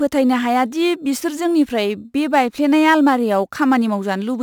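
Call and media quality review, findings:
Crude rate conversion, whole clip. Gritty, inharmonic fizz riding on louder and brighter speech, roughly 30 dB under the voice. Probable component: resampler repeating nearest samples without filtering, consistent with a 44.1 kHz to 48 kHz step. Spectrogram: faint non-harmonic images and aliased lines beside speech energy, strongest in high bands. Waveform: periodic duplicated samples, small stair-steps.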